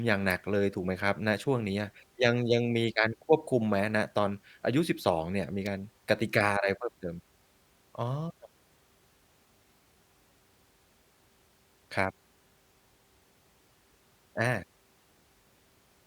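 At 0.30 s a sharp snap cuts across the speech. It is an electrical switching spike, lasting just under a hundredth of a second and peaking at about -25 dBFS. The same snap returns at 5.66 s, with the same brevity and level. Each one sits on top of the speech rather than replacing it. The likely cause is a nearby switch or motor arcing briefly, with the audio line catching that burst of interference.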